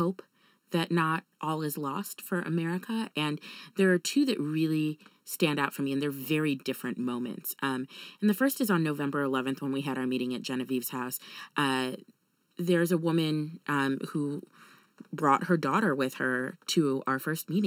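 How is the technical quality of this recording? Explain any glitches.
The recording has channel delay (comb filtering) throughout. One channel arrives a little under a millisecond late, and when the two are summed to mono, shared content cancels at evenly spaced frequencies, with the first notch near 700 Hz. The speech sounds hollow and phasey.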